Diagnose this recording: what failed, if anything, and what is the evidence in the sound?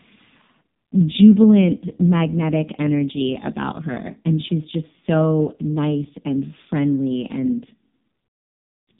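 The codec stage is the culprit. This speech has gone through the AMR narrowband mobile codec, and it sounds that way from start to finish. Nothing above about 3.8 kHz survives, which gives the whole clip that boxed-in phone quality. The damage is heavy: the voice comes out buzzy and synthetic, which fits AMR-NB's lowest mode, around 4.75 kbps. At that rate each 20 ms frame carries only a crude vocal-tract model and a handful of excitation pulses, so the natural detail gets rebuilt as buzz.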